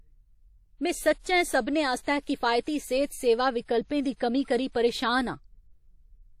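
Throughout the speech the sound rings and smears, with a washy hiss that swells and fades along with the signal, and nothing is present above 15.6 kHz. This is likely WMA compression at a low bitrate, around 48 kbps, where long transform blocks spread quantisation noise and weak detail is zeroed.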